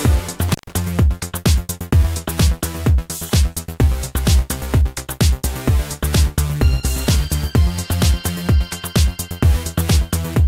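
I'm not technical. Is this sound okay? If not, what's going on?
No. Near the start, between 0.48 and 0.73 s, the sound briefly drops out with a crackle at its edges. This is an intermittent contact. A loose cable or plug opened for about 131 milliseconds, cutting the signal.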